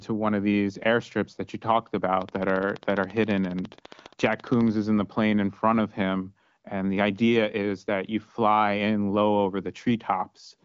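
From 2.22 to 4.69 s, after "airstrips that you talked" and before "is in the plane", a train of clicks: around forty evenly spaced pulses at 14.6 per second, peaking about 5 dB above the speech. This is likely interference from nearby equipment or a faulty connection or power supply. Heard through the AMR-WB band limit near 7.5 kHz, it sounds like steady ticking laid over the talker.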